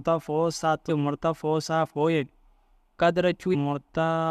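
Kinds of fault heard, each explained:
Damaged data in a compressed stream: two brief disruptions break into the speech, at 0.88 s and from 3.53 to 3.55 s, each about 20 ms long. Corrupted bytes in the encoded stream made the decoder misread those frames and lose sync until it found the next valid frame header.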